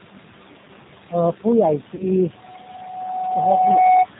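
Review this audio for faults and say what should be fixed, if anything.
The whole clip carries noise suppressor artifacts. The background gets pulled down by about 17 dB between phrases and comes back up under the speech, where the suppressor is chewing on bands it mistakes for noise. The room noise itself, roughly 12 dB under the speech, would be fine left alone. Easing the suppression depth or using a gentler suppressor would avoid this.

G.729 codec damage is plainly audible throughout. The sound has that rough, slightly synthetic quality of a codec that rebuilds speech from a vocal tract filter, a pitch predictor and a handful of pulses per frame. The rate it suggests fits 8 kbit/s G.729A. There's also nothing above 4 kHz, which leaves everything narrowband and a bit boxy. A wideband codec such as G.722 or Opus on this link would prevent it.

VoIP packet loss concealed by the speech codec shows up from 1.95 to 2.06 s. 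About 40 ms of audio is missing, which fits two lost 20 ms packets. The decoder covers the gap by extending the last pitch and filter state, so you hear a short smear that fades, and because each frame leans on the previous one, the sound stays weak or distorted for a while after real packets resume. A jitter buffer with FEC or a cleaner network path would head this off.

The loudspeaker feedback squeal starts at 2.23 s and runs to 4.06 s, a single tone at 741 Hz. It's the classic loop: the mic hears the speaker it's feeding, and at that frequency the round-trip gain tops one, so the tone grows on its own over roughly one and a half seconds until it sits about 5 dB above the speech. It doesn't break off until 4.06 s. Headphones, less monitor gain, or a notch or echo canceller on the loop would stop it.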